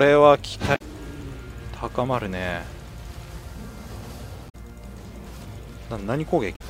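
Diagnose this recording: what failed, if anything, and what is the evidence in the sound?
Three brief glitches, each about 0.09 s long, break into the audio at 0.72–0.81 s, 4.46–4.55 s and 6.52–6.61 s. This is damaged data in a compressed stream at the codec stage: corrupted bytes make the decoder misread those frames and lose sync until the next valid frame header.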